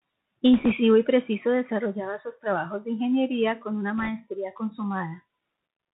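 From the start the speech carries the sound of a Bluetooth CVSD headset codec, which fits a 64 kbps link sending one up-or-down bit per sample with an adapting step. The damage is plainly audible: nothing survives above 4 kHz, s sounds come out scratchy, and a fine granular hiss sits beneath the speech. On a spectrogram, energy stops flat at 4 kHz across the whole clip, with a grainy noise floor filling the gaps.

At 0.54 to 0.72 s, bit errors on the Bluetooth voice link set in, at roughly 2 percent of bits. Because each flipped bit nudges the output by only one step, sized by the speech level, and the error fades, there are no sharp clicks, just a rushing, crackly noise over the speech. A second burst follows at 3.98 to 4.10 s, somewhat milder at around one and a half percent. In the waveform both stretches look fuzzy rather than spiked; the spectrogram shows broadband speckle below 4 kHz.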